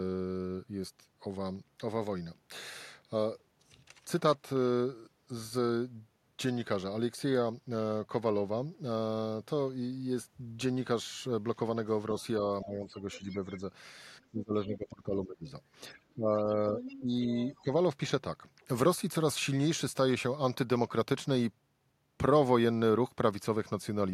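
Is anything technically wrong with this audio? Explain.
Yes, there are echo-canceller problems during a stretch of double talk.

Speech suppressed in double talk, at 12.64–13.64 s, 14.31–15.47 s and 15.94–17.68 s: the talker dips by roughly 10, 20 and 15 dB, likely because the canceller couldn't separate them from loudspeaker echo.

The other side's voice is leaking through at 13.0–13.6 s, 16.79–17.0 s and 17.37–17.61 s. These are faint scraps about 15–20 dB down, most likely leftover echo the canceller missed.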